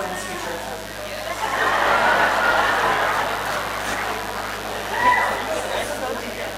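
Mains buzz runs throughout the clip, from start to finish. Sharp switching spikes on a 50 Hz supply have leaked into the audio path twice per cycle, stacking harmonics into the kilohertz range. The result is a steady, raspy buzz sitting fairly loud, roughly 15 dB below the sound.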